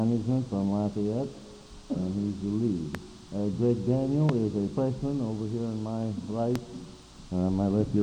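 Three sharp, loud pops cut through the sound, at 2.95 to 2.97 s, 4.29 to 4.32 s and 6.56 to 6.58 s. Each is a single brief crack, roughly 15 dB above the surrounding level, and the sound carries on uninterrupted beneath it. These are loud pops, likely caused by sudden voltage spikes from something like a switch, a connector or a static discharge, with the circuitry downstream shaping each spike into a short burst.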